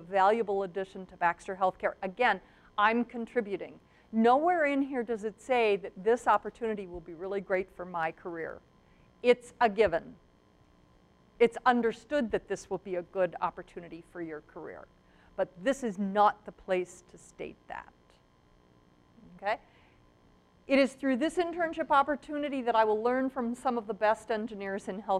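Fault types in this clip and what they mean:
block size mismatch (truncated): from 6.22 s to the end, one stage hands over 1024-sample blocks that the next stage reads only partly, discarding each block's tail. The abrupt joins at each block boundary produce a buzz at about 43.1 Hz, while speed stays unchanged.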